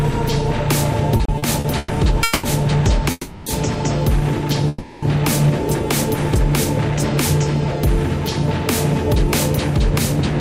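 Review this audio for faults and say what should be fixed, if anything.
From 1.17 to 2.45 s there's a stutter, repeated stalls: six gaps, longest 200 ms, about 440 ms of held-over sound in total, roughly a third of that span. Packets were arriving late, so the jitter buffer kept running dry. A deeper or adaptive jitter buffer would ride this out.

At 3.11 to 3.48 s and 4.68 to 5.04 s there's a call audio freeze: the last sound holds for about 350 ms, then resumes where it stopped. Nothing is lost, but a gap gets inserted. Likely packets held up in transit. Fixing the network path's delay spikes, or prioritising voice traffic, should prevent these.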